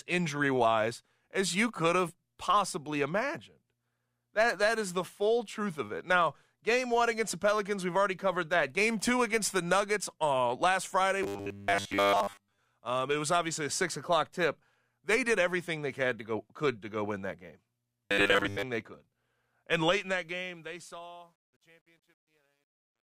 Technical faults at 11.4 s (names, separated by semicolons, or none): robotic sound from repeated short buffers